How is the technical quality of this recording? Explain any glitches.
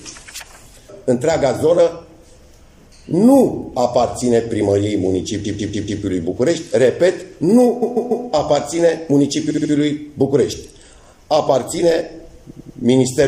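The technical quality is poor, with a coarse compression sound throughout and four stutters.

The whole clip shows MP3 compression, likely at a low bitrate around 64 kbps. Too few bits force the encoder to cut the treble and drop weak frequency components, giving a clearly audible watery, swirling texture with smeared attacks.

Repeated frames occur at 5.44–6.01 s, 7.81–8.25 s, 9.49–9.71 s and 12.49–12.78 s. At each point a block of compressed frames was sent again, so the decoder replays it. The blocks are 144 ms, 144 ms, 72 ms and 96 ms long, heard as a stutter repeating three or four extra times.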